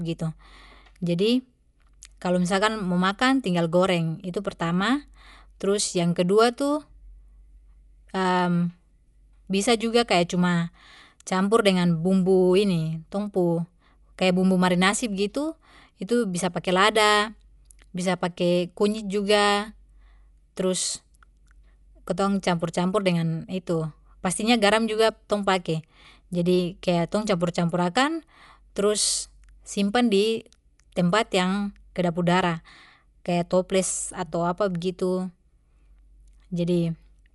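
Speech that sounds dull and band-limited throughout, with nothing above about 11.4 kHz and a rough, fluttering noise clinging to voiced tones. The likely cause is Dolby Digital compression at a low bitrate, which fits about 64 kbps, where starved frequency lines get filled with dither noise.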